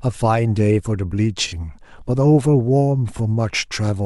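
At 1.47 to 1.54 s and again at 3.16 to 3.20 s, the speech shows a corrupt frame concealed: the AAC decoder rejected damaged data and filled the gap itself. The first span fits two frames and the second fits one.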